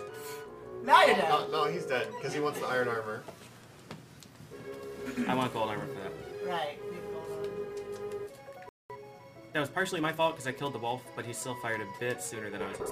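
A hiss and roughness runs through the whole recording. It grows on loud and bright passages and disappears in silence. That is sample clock jitter, around 4 microseconds of timing wobble, leaving an error roughly 30 dB below the signal. The converter samples slightly early or late, and steep waveform slopes turn that into noise. At 8.69 s the sound cuts out abruptly for about 0.21 s, until 8.90 s. This playback stall likely came from the player running short of data or being blocked. From 8.90 s to 10.28 s the audio is hurried, about 1.15 times normal speed, at unchanged pitch. That is time-compressed catch-up. Small pieces are cut and cross-faded to clear the backlog left by the stall.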